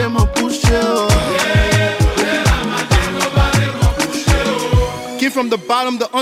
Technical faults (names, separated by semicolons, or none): none